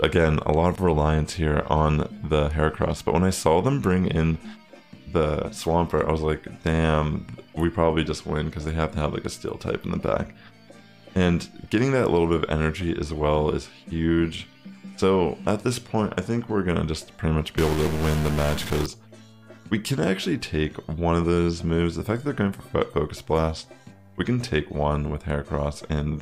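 From 17.57 s to 18.86 s the sound turns harsh and buzzy, with a gritty edge riding on everything, and any low-level passages pick up a noise floor that wasn't there before. This is most likely a stuck bit: one data bit held at a fixed value, so roughly half the samples land off by that bit's weight, a step of around -25 dBFS. The error pattern follows the waveform, which produces the buzz.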